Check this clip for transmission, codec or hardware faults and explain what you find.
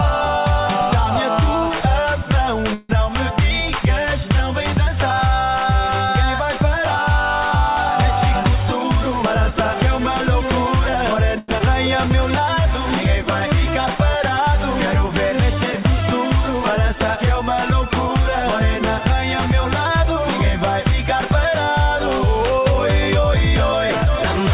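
Six timing faults are audible, all from packet delivery and jitter-buffer handling rather than hardware. The audio is band-limited to nothing above 4 kHz, which fits a narrowband call codec such as G.711.

From 2.74 to 2.91 s the sound stops moving forward and the last moment is smeared into a fading buzz for about 152 ms, then resumes where it left off with nothing lost. This is a call audio freeze, likely caused by delayed packets draining the jitter buffer while the receiver extended the last sound.

From 8.63 to 11.29 s the audio runs slightly fast, at about 101% speed with unchanged pitch. This is a jitter buffer speed-up: the receiver trimmed tiny pitch-period slices, roughly 50 ms in total, to shed excess buffered delay.

From 11.38 to 11.50 s a sound is held too long for 98 ms, with a faint buzz or dip before playback continues seamlessly. This short stall from a late packet comes from a packet missing its deadline, so the receiver stretched the previous audio until it arrived.

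From 11.58 to 11.62 s playback lurches forward with almost no gap, and around a tenth of a second of audio vanishes, its two sides butted together. This is a skip ahead: a stretch of audio was dropped, in transit or by the jitter buffer, while later packets were already queued.

From 11.88 to 14.19 s the audio drags at about 98% speed, same pitch, with slightly drawn-out sounds. This is a jitter buffer slow-down: repeated pitch periods, 65 ms in all, rebuilt the buffer's reserve.

From 17.90 to 24.07 s the pace again creeps up, to about 102%, at normal pitch. This is a second jitter buffer speed-up, with roughly 150 ms cut in small pieces to bring the delay back down.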